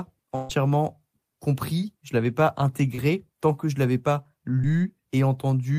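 From 0.35 to 0.51 s there is a burst of packet loss. Around 140 ms of audio never arrived in time, and the receiver covered the hole by extending the last sound it had and turning it down, with no true silence. It sounds like a held, fading tail, and the speech picks up further along with that stretch missing. Its length and the audible fade set it apart from the brief glitches later.

Short concealed packet loss occurs at 2.95 to 3.00 s and again at 4.62 to 4.65 s. Each time roughly 20 ms failed to reach the decoder, and the gap was patched by continuing the preceding sound for about 20 ms before blending back into the real audio. These come across as quick smears or wobbles rather than an audible fade, far shorter than the burst near the start.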